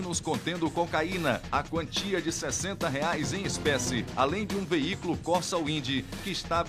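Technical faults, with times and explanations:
No technical faults can be heard anywhere in the clip. Nothing in the audio calls for a time or an explanation.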